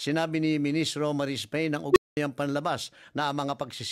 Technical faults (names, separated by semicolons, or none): unstable filter